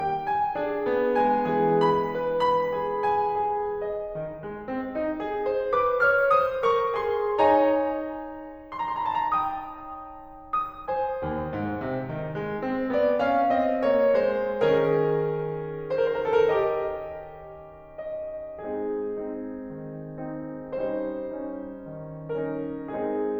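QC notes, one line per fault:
Nothing to flag here, this music runs along without any problem worth a line.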